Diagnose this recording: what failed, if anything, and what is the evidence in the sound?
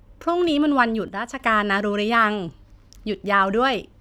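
Speech and noise floor drop about 6 dB together at 1.08 s and recover at 1.40 s: a sudden gain jump, likely unramped digital gain in processing.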